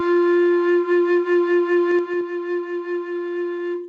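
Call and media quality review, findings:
Gain pumping, throughout the music. Level swing around 5 dB; dynamics squashed. Likely cause: input gain far too high with a fast limiter or compressor clamping every peak. Unlike a deliberate fade, the level follows the music's own peaks and recovers between them.

Zipper noise, 1.88–2.22 s. Ticking rides on the music while level drops about 15 dB in 3 dB steps, roughly 15 steps per second. Probable component: an unsmoothed gain stage updating per buffer, each step clicking. The Opus call path's top end stops at 8 kHz on a 48 kbps stream, and is unrelated to these faults.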